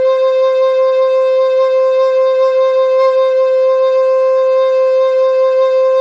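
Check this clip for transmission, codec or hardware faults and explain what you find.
Nothing in this music points to a transmission, codec or hardware problem, and the signal comes across intact and continuous throughout.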